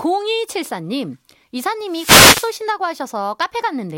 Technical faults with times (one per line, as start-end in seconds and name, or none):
1.86-2.58 wireless microphone noise hit